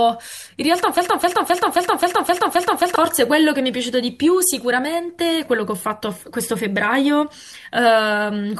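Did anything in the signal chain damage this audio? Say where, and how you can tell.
Yes. A broken-record loop runs from 0.97 s to 2.96 s of this speech. A fragment of about 264 ms repeats exactly, back to back, eight times, with no variation between passes, and the speech that should fill those two seconds never arrives. The stage is likely a playback or streaming buffer that stalled: with no new data coming in, it kept re-sending the last block it held until the stream resumed.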